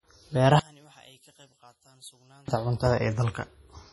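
From the start, the speech carries heavy codec damage. The sound is watery and swirly, and s sounds chirp with a metallic edge. Nothing is left above 11.5 kHz. This is likely MP3 compression, at a bitrate that sounds as low as about 32 kbps. With so few bits, the encoder drops weak frequency lines, and they flicker on and off between frames. It also cuts the treble at a fixed point. Attacks smear throughout.

From 0.59 to 2.48 s, the speech nearly vanishes. The level falls by about 28 dB. Only a quiet remnant of the sound remains, and it returns at full level at 2.48 s. This points to one channel inverted, likely. If one stereo channel has reversed polarity, the sound common to both channels cancels when they are summed to mono. What survives is just the small difference between the two channels.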